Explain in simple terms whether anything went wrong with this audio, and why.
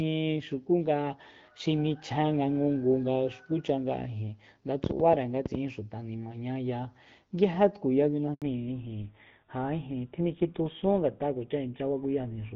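A burst of ticking and popping sits on top of the speech from 4.84 to 5.56 s: about seven sharp clicks, roughly eight a second at an uneven pace, standing out above the voice. This is a train of clicks, most likely interference from nearby equipment or a faulty connection or power supply.

At 8.34 s the voice suddenly drops out, leaving 80 ms of silence until 8.42 s. This is a handover gap. The phone switched the call to a different network, and nothing came through during the changeover, so that sliver of speech is simply gone.

Right after that gap, from 8.42 s to the end, the voice turns duller and rougher, as if heard through an old phone. This is a fallback to narrowband. Before the handover the call ran as HD Voice. After it, the call dropped to an older, basic phone codec that carries nothing above 4 kHz.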